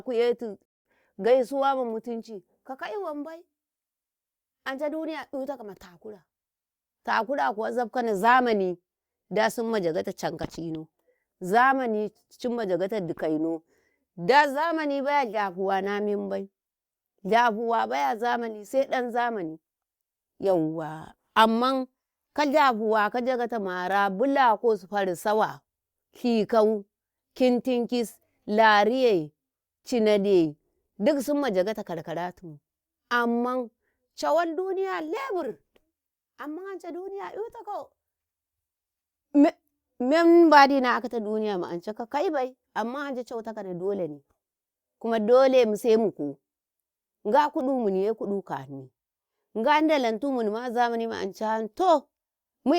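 At 0.65 s the speech stops dead and goes silent for about 0.2 s, then picks up at exactly the point where it broke off. This is a rebuffering stall. The player ran out of downloaded audio and waited for more. Nothing is skipped. About 199 ms of silence is added.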